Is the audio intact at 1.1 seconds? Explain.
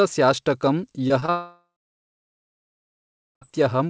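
No. Short concealed packet loss spans 1.08 to 1.12 s, then again at 1.20 to 1.24 s. About 20 ms went missing and was filled by continuing the previous sound, giving a brief smear rather than a silent gap.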